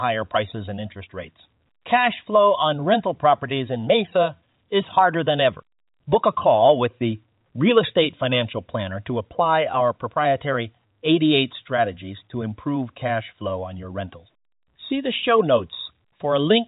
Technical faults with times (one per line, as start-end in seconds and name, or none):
none